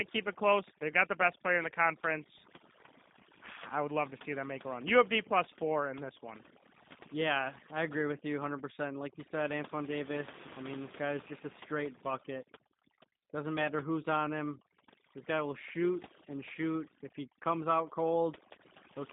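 Throughout the speech, the background drops and breaks up into twinkling specks, and the voice's softer edges fade in and out. This is overdone noise removal: a noise reduction stage set far too aggressively pushes individual frequency bands down or off whenever they sit close to its noise estimate, so along with the noise it strips away the quieter parts of the voice.

Over the full length, the voice also has a rough, slightly synthetic edge, and the processed background warbles. The band is narrow, running from about 150 Hz to 3.7 kHz, with nothing at all above 3.8 kHz, which fits a telephone-grade G.729 codec at 8 kbit/s, here the G.729A variant. It rebuilds speech from a vocal tract filter, a pitch predictor and a handful of pulses per frame, and its damage is plainly audible.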